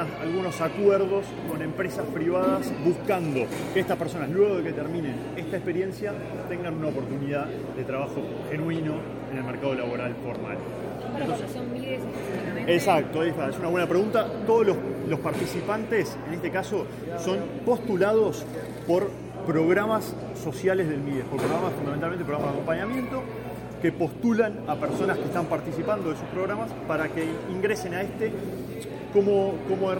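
Mains hum runs through the entire clip as a steady low tone at 60 Hz, sitting roughly 15 dB below the wanted signal. Power-line current has coupled into the audio path, pointing to a ground loop or a nearby transformer, and leaves a constant drone underneath.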